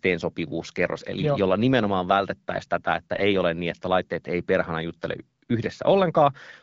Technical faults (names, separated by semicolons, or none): AMR bit errors